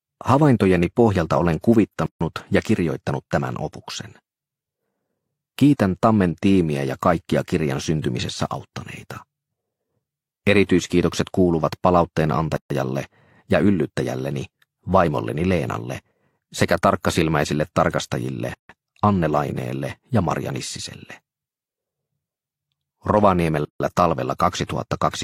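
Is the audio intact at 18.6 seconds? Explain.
No. From 18.54 to 18.69 s there is a gap at a join of encoded pieces: a 155 ms silence cuts into continuous sound with smeared edges before the sound resumes where it stopped, leftover encoder start delay and last-frame padding from untrimmed joined pieces.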